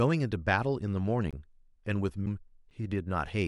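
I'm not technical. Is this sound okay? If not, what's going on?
No. There are three short glitches in this speech.

At 1.31 s and again at 2.70 s you can hear a block of digital silence. The sound drops to total silence and then comes straight back. The first gap lasts about 20 ms and the second about 8 ms. Because there is no fade, the sound cuts out and back abruptly, so the first is heard as a short hole and the second as a quick tick. This happens when the playback software falls behind and leaves a small stretch of audio empty.

At 2.26 s there is a CD skip. The disc player's laser jumped to another part of the disc. Playback mutes very briefly, just a few milliseconds, with a tick. Then it carries on from a different spot, so the speech jumps a little instead of flowing on.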